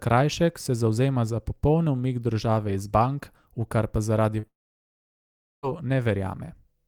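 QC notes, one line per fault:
4.39–4.45 s, short concealed packet loss: about 40 ms of the speech didn't reach the decoder in time, so the receiver stretched the last bit of sound over the gap and blended back in. You hear it as a quick smear or wobble.
4.47–5.65 s, long network dropout: roughly 1.2 s of the speech is gone. There's a brief fading tail, then about 1.1 s of silence, and the speech picks up later without the missing part. That's likely a network outage rather than anything at the source.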